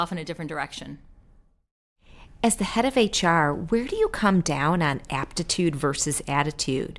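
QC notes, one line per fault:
No faults found in this clip.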